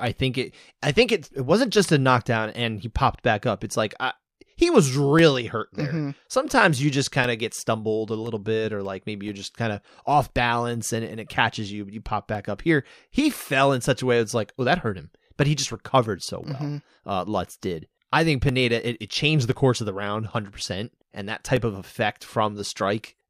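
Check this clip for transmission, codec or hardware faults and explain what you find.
There's one fault here, periodic USB or driver dropouts, running from 0.07 s to 22.59 s. Roughly every 1.02 s, a very short slice of the speech, around a millisecond, drops out and goes silent, with about twenty of them across that span. Something is stalling the USB link or audio driver on a fixed schedule, so each stall punches a tiny gap. You hear it as an evenly spaced tick under the speech, only audible while there's signal.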